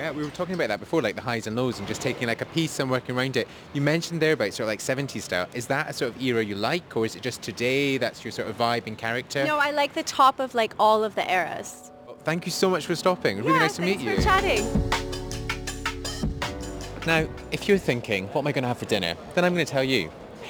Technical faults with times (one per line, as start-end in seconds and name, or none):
0.00-20.50 crude rate conversion